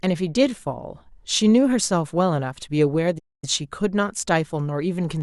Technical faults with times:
3.18-3.44 playback stall

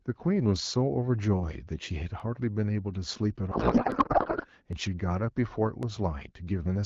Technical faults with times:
0.56 dropped samples
2.20 dropped samples
3.51-4.46 codec payload misread
3.92 dropped samples
4.73 dropped samples
5.83 dropped samples

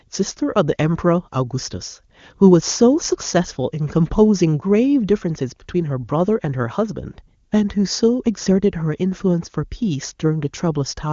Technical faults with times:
none

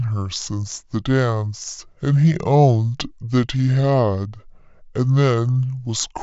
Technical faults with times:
0.00-6.22 wrong sample rate

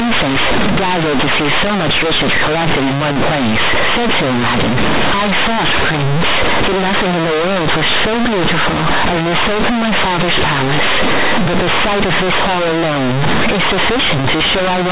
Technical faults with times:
0.00-14.92 companded audio read as linear

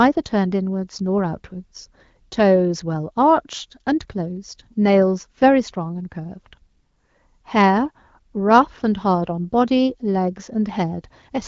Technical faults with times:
none

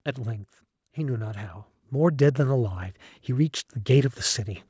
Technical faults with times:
0.94-4.23 automatic gain rising

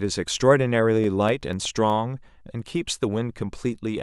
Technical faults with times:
0.67-1.90 CD scratch ticks

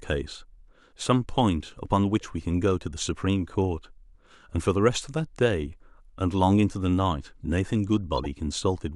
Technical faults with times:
2.21 corrupt frame decoded
8.17-8.26 corrupt frame decoded

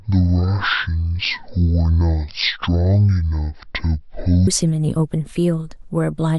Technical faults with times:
0.00-4.47 section at the wrong speed

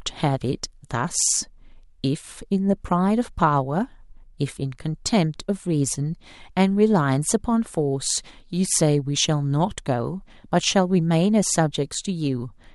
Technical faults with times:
none

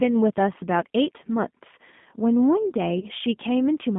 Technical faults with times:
0.00-3.99 G.729 codec
3.00-3.06 VoIP packet loss concealed by the speech codec

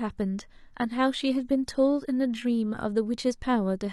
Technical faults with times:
0.00-2.50 adaptive stream starting at a low bitrate

